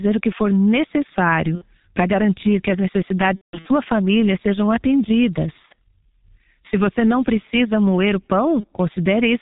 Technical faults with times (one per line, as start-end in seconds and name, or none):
0.00-9.41 G.723.1 codec
1.55-1.64 VoIP packet loss concealed by the speech codec
3.35-3.72 VoIP packet loss concealed by the speech codec
5.66-5.71 VoIP packet loss concealed by the speech codec
8.60-8.65 VoIP packet loss concealed by the speech codec